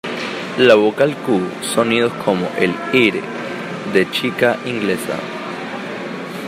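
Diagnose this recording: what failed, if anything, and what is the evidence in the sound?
The converter stage was overdriven, so speech peaks were cut flat at the converter's limit: hard clipping. From 0.62 to 1.03 s, about 5 dB over, the added high harmonics crackle on peaks; from 2.29 to 3.08 s, about 2 dB over, peaks crackle.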